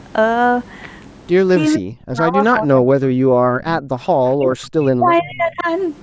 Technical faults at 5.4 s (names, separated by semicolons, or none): speech suppressed in double talk; echo leak